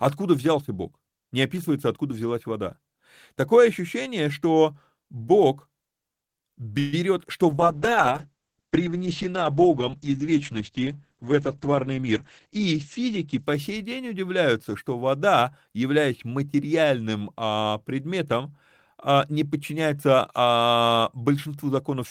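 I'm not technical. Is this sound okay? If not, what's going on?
No, there are three problems, all typical of an internet call.

At 6.79 to 6.95 s there is a call audio freeze. The speech briefly hangs as a short fading buzz for about 0.13 s, then carries on where it stopped. Nothing is lost, but that pause is inserted into the speech. The likely cause is that pieces of the call arrived late and the receiving end ran out of audio to play, so it stretched the last sound to fill the wait.

From 7.50 to 14.50 s there is a call bitrate drop. The speech turns muffled and rougher for about seven seconds, before clearing up around "что вода являясь материальным". The connection seemed to weaken, so the sender squeezed the audio into much less data. To do that it discarded the crisp upper range above about 8 kHz and coded what remained more coarsely.

Inside that stretch, from 11.60 to 13.19 s, there is a jitter buffer speed-up. 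The speech runs about 8% fast at the same pitch, so it sounds slightly hurried. The receiver had built up too much waiting audio, so it trimmed many tiny slivers to catch up, removing roughly 150 ms in total.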